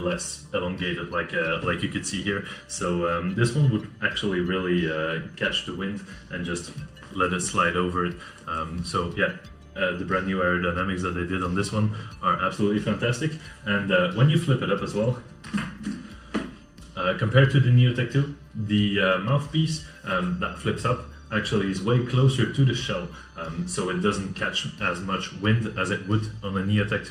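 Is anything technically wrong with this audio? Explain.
Yes, there's channel delay causing comb filtering across the whole clip. One channel runs a fraction of a millisecond late, so the mono sum cancels at evenly spaced frequencies, starting around 700 Hz. That leaves fixed notches that make the sound hollow and phasey.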